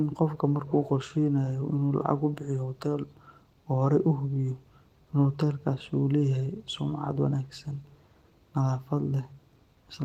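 Clock drift between sender and receiver runs through the whole clip. The sender's clock runs roughly 1.5% slow against the receiver's, so the receiver keeps running short of audio. On a waveform the speech looks subtly stretched, with small seams where material has been duplicated.

Repeated timing corrections run from 0.04 s to 9.58 s. The receiver inserts short repeated slivers to keep pace, which brings playback to 98% speed and adds roughly 150 ms overall. These sound like faint hiccups and an uneven tempo, and a spectrogram shows brief repeated columns with small discontinuities at the joins.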